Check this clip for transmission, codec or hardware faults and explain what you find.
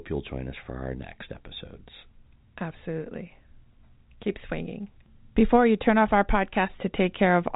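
Nothing in this speech needs flagging; it's ordinary G.711 telephone audio, topped out around 3.8 kHz the way a phone line normally is.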